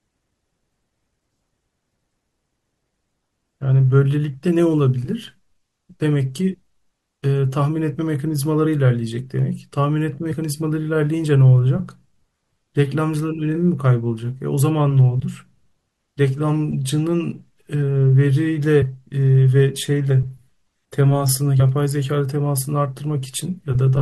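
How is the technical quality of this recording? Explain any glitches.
The recording has three short glitches, all of the same kind: compressed frames skipped. They occur at 10.30–10.34 s, at 20.10 s, and at 21.59–21.62 s. At each point, whole blocks of the coded speech never reach the output. The first two jumps lose about 40 ms and the last about 20 ms. At each join the speech makes a tiny leap forward.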